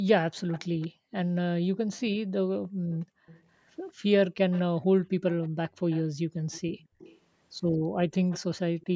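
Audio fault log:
0.31–3.43 s, 4.51–7.19 s and 8.29–8.86 s, echo leak: A faint copy of the speech follows it 226 ms late, about 20 dB below it. It sounds like a trailing repeat. The likely cause is a loudspeaker on the far side whose echo canceller let part of the call back through its microphone.
0.88–1.11 s, 2.6–3.27 s, 5.08–5.18 s and 6.12–7.99 s, background gated by the echo canceller: The room sound sinks by up to about 40 dB and then comes back. Some dips are brief. Others last longer. The canceller pulled the microphone down hard while the loudspeaker was playing.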